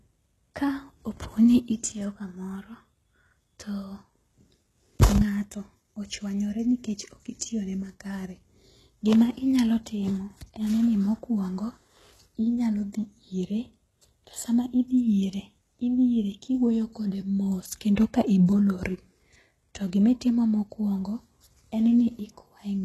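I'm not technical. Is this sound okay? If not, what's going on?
No. Throughout the speech, the treble sounds artificial: s sounds come out gritty and lispy, and nothing at all is present above about 12.3 kHz. This is most likely HE-AAC compression, a squeezing method that keeps only the lower part of the sound and fakes the top by copying lower parts upward. Unlike plain muffling, which simply dulls the sound, this keeps a bright top end, but the brightness is rough and doesn't match the voice underneath.

At 17.96 s, just after "kode mos", there is a single pre-echo: a short hiss of about 14 ms arrives just before a sharp sound, and that sound's start is blurred. The compression spread its noise across a short chunk of time, so some leaked in ahead of the attack. What sets it apart from a click or a dropout is that the hiss comes before the sound it belongs to, not after it or in place of it.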